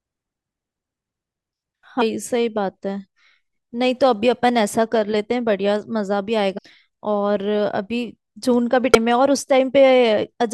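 At 2.00 s the speech breaks with a short glitch. This is damaged data in a compressed stream. Bytes in the stream are wrong there, so the decoder misreads the frame and loses sync. It then hunts for the next valid frame header. The same fault returns from 6.57 to 6.59 s as a brief glitch. It comes once more at 8.94 s as a quick blip. Each lasts only a few hundredths of a second.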